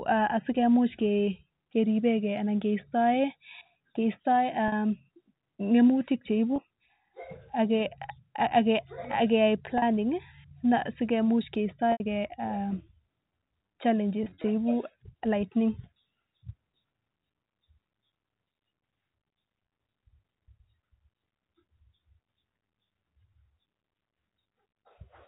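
Packet loss with pitch repetition interrupts this telephone-band speech at 4.68–4.72 s, 6.56–6.58 s (after "ngemutik cheibu"), 9.78–9.82 s, 11.92–12.00 s, scattered across 14.24–14.44 s, and at 19.68–19.70 s. Each gap of 20 to 80 ms is bridged by looping the last pitch period, producing a brief held buzz, though the 80 ms gap fades into silence before the speech returns. The gap lengths fit 20 ms packets.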